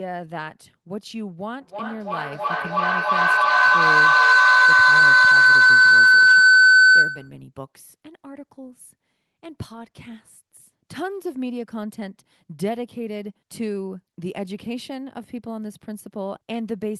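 From 1.61 to 7.44 s, a feedback howl grows near 1.5 kHz, pulsing about every 300 ms and peaking about 16 dB above speech; unlike echo, the repeats build instead of fading.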